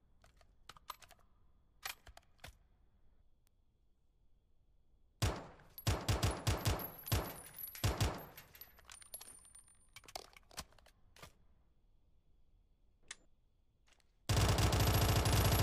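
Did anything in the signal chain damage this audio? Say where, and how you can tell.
Yes, three bit error spikes at 1.11, 3.47 and 6.65 s: single clicks, up to about -12 dBFS. Flipped bits in memory or a digital link jolted one or two samples.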